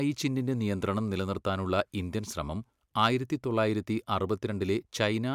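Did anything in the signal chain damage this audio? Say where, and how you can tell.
No, nothing at any stage from capture through playback has audibly damaged this speech.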